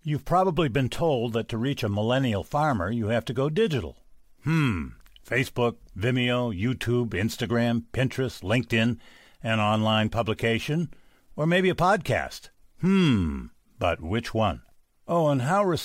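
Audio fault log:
No faults detected in recording.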